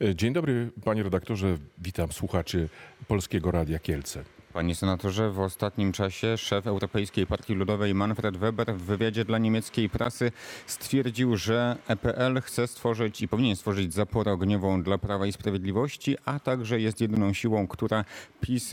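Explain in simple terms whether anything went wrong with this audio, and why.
At 10.04 s and 17.16 s you get a quick tick. Each one is a block of digital silence: the sound drops to nothing for about 11 ms and snaps straight back with no fade. That gap length fits a 512-sample buffer the program didn't fill in time.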